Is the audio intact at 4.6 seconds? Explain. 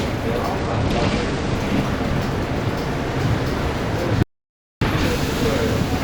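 No. At 4.6 seconds the sound sits inside an audio dropout to silence running from 4.23 to 4.81 s, about 0.59 s lost. The input was likely cut off while recording continued, so the sound stops abruptly into dead silence with no room tone and resumes mid-flow. On a waveform it shows as a flat line, and on a spectrogram as a fully blank vertical band.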